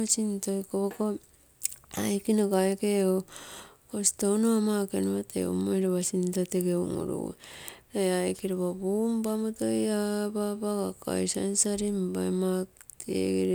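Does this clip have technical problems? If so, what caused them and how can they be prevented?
No, the speech in this clip comes through with no audible technical faults, so there is nothing to trace back to a cause or prevent.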